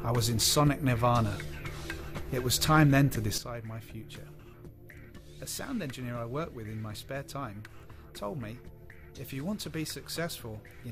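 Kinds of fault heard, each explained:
Sudden gain jump: at 3.38 s the level drops by about 10 dB in one step and stays down to the end, with the background noise falling along with the sound. That shared step is what tells it apart from a fade or compressor action, and it likely comes from a gain setting applied without a ramp.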